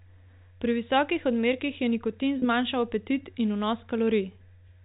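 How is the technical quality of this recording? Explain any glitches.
There is one glitch, a brief dropout at 2.39 to 2.42 s. It is packet loss with pitch repetition. About 30 ms of audio went missing, which fits three 10 ms packets. The receiver filled the gap by repeating the last pitch cycle it had. That makes the sound hang for a moment with a slightly held, buzzy quality before normal audio resumes. The audio has the narrow band of G.711 telephone coding.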